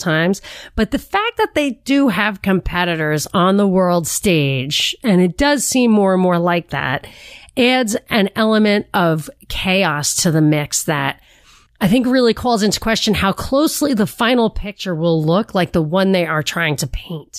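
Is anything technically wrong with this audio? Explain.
No, nothing is technically wrong with this audio.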